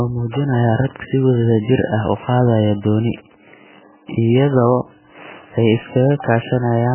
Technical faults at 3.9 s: MP3 compression

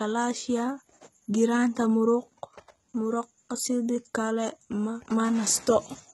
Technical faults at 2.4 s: HE-AAC compression

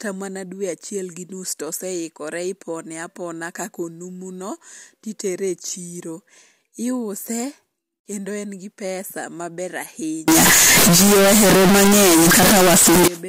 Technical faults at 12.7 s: float read as integer

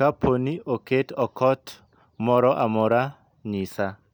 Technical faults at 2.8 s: none

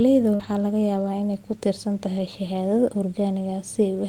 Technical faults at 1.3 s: none

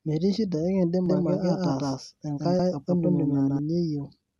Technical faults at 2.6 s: doubled audio track; compressed frames skipped

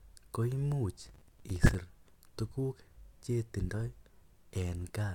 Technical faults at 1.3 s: processor overload crackle

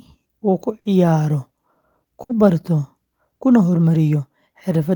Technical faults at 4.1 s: none

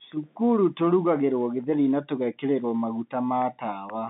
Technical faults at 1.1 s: none

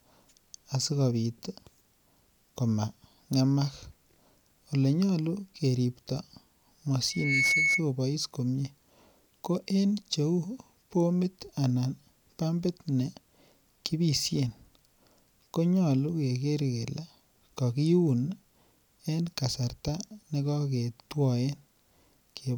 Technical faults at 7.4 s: loudspeaker feedback squeal

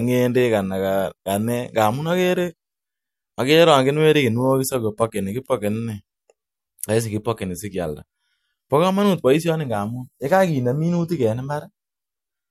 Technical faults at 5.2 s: clock slip clicks

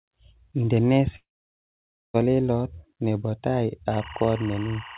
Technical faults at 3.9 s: timecode bleed

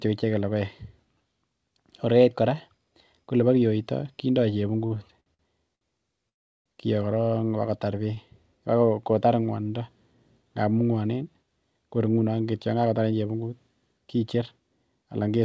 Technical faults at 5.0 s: repeated stalls (stutter)

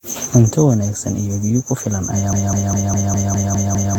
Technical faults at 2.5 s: generation loss; broken-record loop

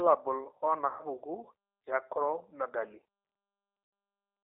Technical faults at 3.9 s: G.729 codec; VoIP packet loss concealed by the speech codec

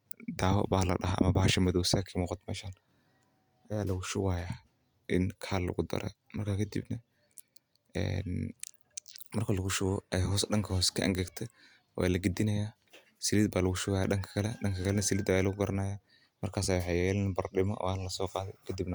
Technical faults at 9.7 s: none

